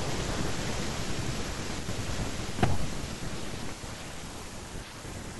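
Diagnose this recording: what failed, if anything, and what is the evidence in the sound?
A loud pop at 3.69 s is a single sharp pulse, peaking a few decibels above the speech. The speech carries on underneath without a break, so nothing was lost. A dropout or buffer glitch would leave a gap or a discontinuity in the signal, and this is neither. The likely cause is an electrical transient in the analogue wiring, such as a connector being disturbed, a switch, or a static discharge. That pulse was added to the signal and then shaped by the circuitry after it.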